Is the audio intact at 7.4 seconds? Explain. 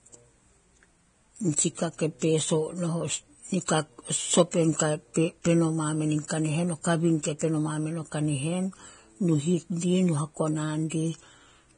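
No. From 7.39 to 7.41 s, a pre-echo of about 24 ms precedes "peno mamen o". Codec noise sized for the loud attack fills the quiet moment just before it, so a short hiss leads into a softened onset. Unlike a click, it is hiss rather than an impulse. Grainy, hissy Vorbis compression is also present here, with nothing above 9.7 kHz, likely from a low bitrate around 23 kbps. Unlike plain low-pass filtering, the remaining treble is roughened as well as cut.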